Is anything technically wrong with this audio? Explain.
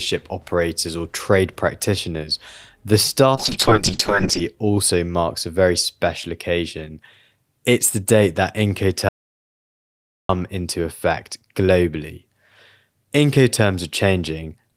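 Yes, there are two faults.

A call bitrate drop runs from 3.36 to 4.49 s, just after "or trade practitioners the". The encoder was starved of bits, and the coarse, band-limited coding fits a fall from about 32 kbps to about 7 kbps. The speech turns muffled and watery for about a second before clarity returns.

An audio dropout to silence occurs from 9.09 to 10.29 s, after "the date that". The input was likely lost while recording continued writing silence, leaving 1.21 s of dead silence without room tone until speech resumes at "into effect globally".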